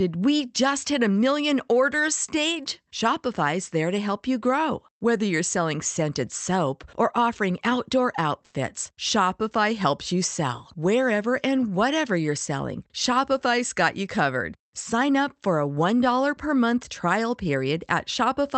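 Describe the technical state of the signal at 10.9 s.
At 10.9 s the speech is intact, carried through the call path's codec with no fault at that moment.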